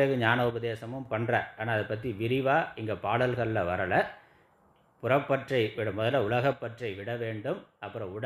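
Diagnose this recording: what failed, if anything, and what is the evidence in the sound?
A channel drops out twice, from 0.50 to 1.06 s and again from 6.53 s to the end of the clip. Each time the level falls abruptly by about 6 dB and recovers just as sharply at 1.06 s. On a waveform this is a sudden step down in envelope height, and a spectrogram shows uniform dimming across all frequencies with vertical edges. The likely cause is an intermittent analogue connection losing one stereo side, halving the mono sum.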